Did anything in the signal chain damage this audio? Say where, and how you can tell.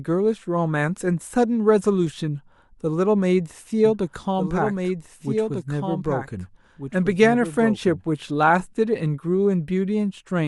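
Yes. From 3.85 s to 8.49 s the speech is heard twice: a second full-band copy trails the original by roughly a second and a half, a few decibels quieter, with no reverberant tail or room colour, and it cuts in and drops out abruptly at those times. That is a doubled audio track, most likely from the signal being captured a second time through a slower path and mixed back in at playback or recording.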